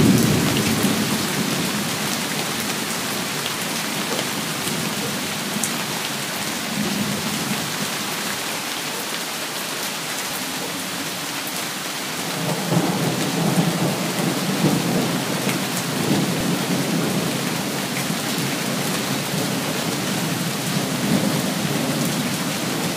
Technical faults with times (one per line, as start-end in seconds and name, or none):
6.83 dropped buffer (overrun)
8.49 dropped buffer (overrun)
10.30 dropped buffer (overrun)
14.98 dropped buffer (overrun)
16.41 dropped buffer (overrun)